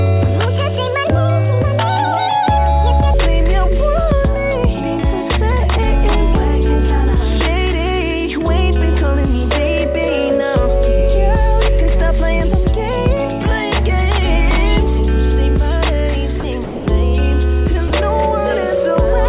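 From 0 to 3.14 s, a section at the wrong speed was likely played against the wrong clock, running 1.52 times too fast. Speed and pitch rise together, so the opening sounds hurried and sits roughly seven semitones high before dropping abruptly to normal.

Later, sound dropped by the voice detector: the sender's detector likely mistook quieter passages for background and stopped sending, so comfort noise fills the gaps at 16.40 s (40 ms), 16.64 to 16.86 s and 17.88 to 17.90 s. In each gap the sound gives way to steady noise or near silence. The band-limited call audio has nothing above 4 kHz, which fits a narrowband codec such as G.711.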